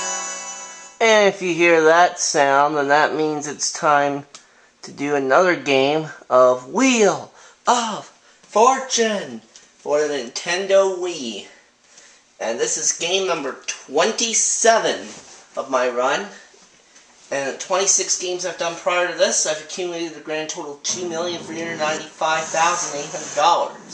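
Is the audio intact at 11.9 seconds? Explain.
Yes, the audio at 11.9 seconds is intact, with no dropout, click, distortion or other fault at that point.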